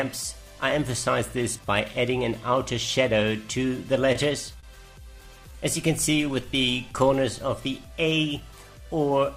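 A short stall from a late packet occurs at 4.12 to 4.16 s and again at 4.60 to 4.64 s. Each time the next packet had not arrived when it was needed, so the jitter buffer ran dry. The receiver held the last sound for about 25 ms and then 29 ms before continuing from the same point. Nothing is skipped; the sound simply lingers a moment too long, with a faint buzz or dip.

A jitter buffer slow-down follows from 5.27 to 6.32 s. The receiver was building up its reserve, and it did so by repeating single pitch periods and fragments of pauses over and over. That added about 55 ms across the stretch, so playback runs at roughly 95% speed with the pitch unchanged. Sounds come out slightly drawn out, sometimes with a mild warble.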